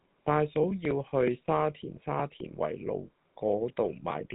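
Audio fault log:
Throughout: GSM full-rate codec, speech turns buzzy and gravelly because a vocal-tract model driven by sparse regular pulses replaces the waveform; nothing passes above 3.8 kHz.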